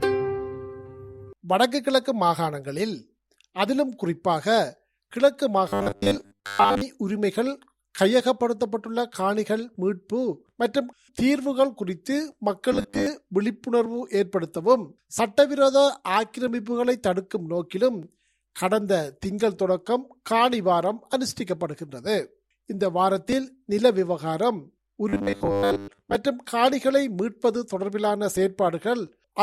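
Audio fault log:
5.68–6.81 s, 12.73–13.07 s and 25.09–26.15 s, robotic sound from repeated short buffers: in each stretch the sound collapses into a stiff, metallic buzz pitched at 100 Hz that roughly tracks the original. The likely cause is audio arriving too late, so the player keeps looping the last chunk of about 10 ms (one cycle of 100 Hz) to fill the gap. Most of the real audio, roughly 70%, gets skipped while the loops play.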